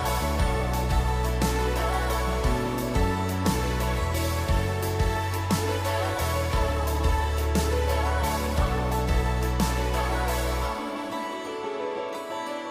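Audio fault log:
No faults found on review of the clip.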